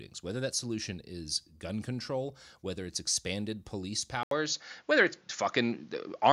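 At 4.23 s there's an 80 ms gap, then the speech turns duller, capped around 7.1 kHz, with a level shift and new faint background noise, likely an input switched to a poorer device.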